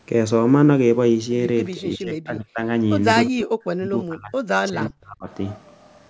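From 1.76 to 2.68 s the speech dips by about 20 dB for roughly 0.7 s, then sinks by about 40 dB from 3.32 to 4.37 s and again from 4.69 to 5.28 s, fading or cutting out in pieces. This is speech suppressed in double talk, likely from an echo canceller that couldn't separate the talker from the far side's loudspeaker signal and turned both down. Between those drops, at 3.26 to 3.30 s, a faint scrap of the voice returns about 343 ms late and about 30 dB below the speech. This echo leak likely comes from a far-end loudspeaker echo that the canceller didn't fully remove.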